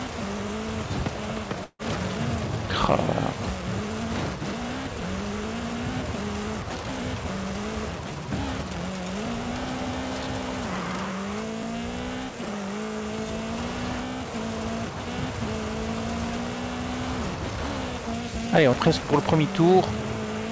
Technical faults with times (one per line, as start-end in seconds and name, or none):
1.64-1.82 long network dropout
2.16 audio missing between chunks
6.89 audio missing between chunks
11.63 audio missing between chunks
18.73 audio missing between chunks